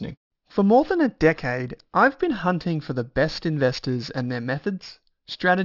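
Aliasing runs through the whole speech clip: energy above 6 kHz folds back below that edge, which fits a rate drop to about 12 kHz with no filter, leaving gritty, metallic sibilants, with the folded energy roughly 20 dB below the signal. Plain band-limiting would only sound dull.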